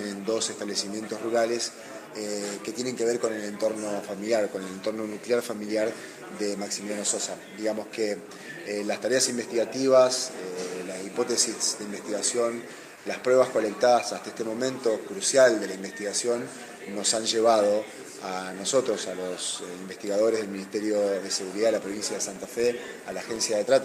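At 12.95 s, a sender that likely stopped transmitting during a pause, as discontinuous transmission does in a codec such as Opus, leaves the receiver to fill the gap with comfort noise in place of the background. For about 100 ms, until 13.05 s, the real background, sitting about 23 dB below the loud passages, is replaced by a smooth, featureless hiss about 3 dB quieter. It is a brief flattening dip before the genuine background returns.

From 21.76 s to 23.48 s, a filter restarted on every block loses its memory at each block boundary and begins each block from silence. The resulting start-up transient repeats 25 times a second, so the audio carries a low, regular buzz or rapid ticking at 25 Hz. It grows and shrinks with the level of the sound, loudest where the signal is strongest and fading in the quieter moments.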